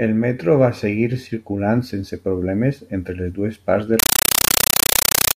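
Right after "les dues parts de", at 3.99 s, the speech gives way to a compressed stream played as audio, and it runs to the end. A Dolby Digital (AC-3) bitstream, which fits a 384 kbps stream, is treated as ordinary samples rather than decoded, so each frame comes out as an 8 ms burst of noise followed by silent padding, repeating 31.25 times a second. You get a harsh, very loud chattering static instead of the voice.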